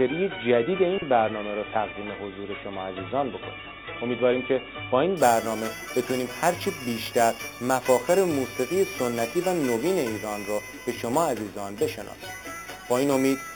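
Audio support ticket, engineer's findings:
Imaging from sample-and-hold upsampling, 5.17 s to end. Bright metallic fizz about 16 dB below the signal, first image 4–8 kHz. This points to 8 kHz material held up to 44.1 kHz with no interpolation filter. Unlike hiss, the fizz tracks the signal's level and moves against its pitch.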